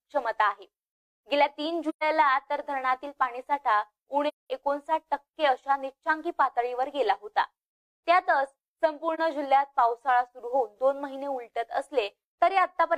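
AAC frame loss with muting: the decoder zeroed the spectrum of lost frames, so the audio fades out and back in through the overlapping windows, leaving soft-edged holes at 1.89–2.03 s (about 128 ms) and 4.28–4.50 s (about 213 ms), and a brief dip at 9.14–9.20 s (about 43 ms, roughly one frame).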